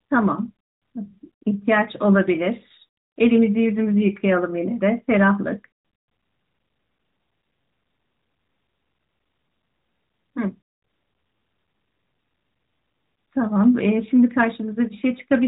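Nothing stood out on listening to this speech clip.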